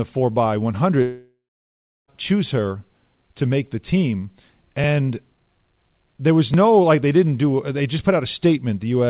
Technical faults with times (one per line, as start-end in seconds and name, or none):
1.02-2.10 long network dropout